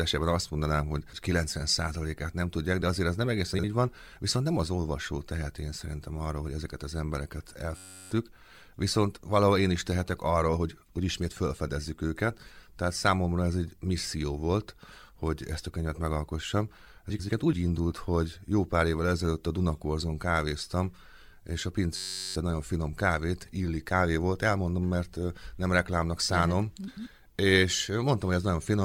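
Frames out of order at 3.54 to 3.64 s: two neighbouring 46.4 ms blocks play swapped, giving a brief garbled flutter. System hang loop at 7.77 to 8.11 s: the playback stalls while the hardware repeats one 10.67 ms buffer, which fits a 512-sample ring buffer, producing a steady 93.8 Hz buzz and about 0.3 s of missing audio. Frames out of order again at 17.10 to 17.30 s, with 92.9 ms blocks exchanged. Another system hang loop at 21.96 to 22.36 s buzzes at 93.8 Hz and loses about 0.4 s. A final out-of-order swap of 92.9 ms blocks at 26.87 to 27.07 s flutters.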